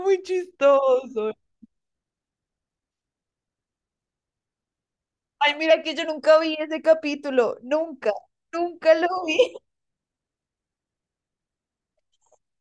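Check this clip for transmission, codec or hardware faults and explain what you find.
One fault is present, a wrong sample rate over the opening section. From 0.0 to 5.70 s the speech runs at 0.919 speed and 1.47 semitones flat. The samples were clocked out slower than they were captured, which fits 24 kHz audio played at 22 kHz. It sounds lower and drawn out. On a spectrogram the harmonics sit lower and the syllables stretch wider until 5.70 s.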